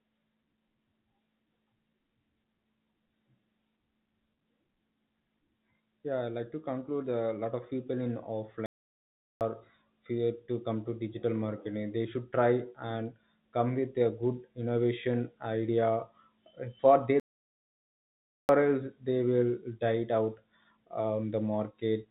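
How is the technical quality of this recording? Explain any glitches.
The recording has a recurring timing problem and two clear dropouts, all heard over a narrowband call path whose spectrum stops at 4 kHz, which fits G.711 mu-law coding.

Clock drift between sender and receiver runs through the whole clip. The sender's clock runs roughly one percent slow, so the receiver's jitter buffer keeps draining. The sound has a faintly uneven pace. On a waveform, speech segments sit slightly out of their natural rhythm, with no single obvious break.

Repeated timing corrections occur from 0.05 s to 21.73 s. Playback runs at 99% speed while the receiver repeats short slices to fill the gap, adding around a third of a second in total. They are heard as small, irregularly spaced hiccups. A spectrogram shows brief duplicated fragments with tiny seams.

There are two playback stalls. The first runs from 8.66 to 9.41 s (0.75 s) and the second from 17.20 to 18.49 s (1.29 s). 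The player most likely ran out of buffered data, so the sound cuts out mid-flow and then resumes. Both show as flat, empty gaps on the waveform and blank vertical bands on the spectrogram.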